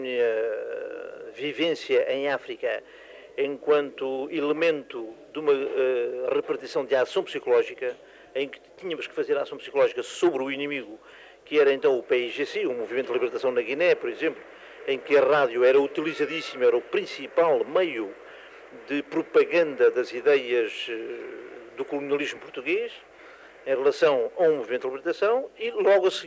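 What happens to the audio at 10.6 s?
Nothing goes wrong at 10.6 s: the audio plays through that moment intact, with no dropout, click, distortion or other fault.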